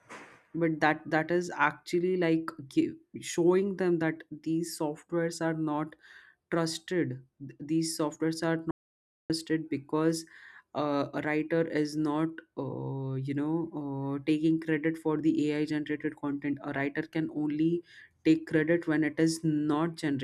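From 8.71 to 9.30 s, an audio dropout to silence, likely a lost input, leaves silence with no room tone, unlike a natural pause.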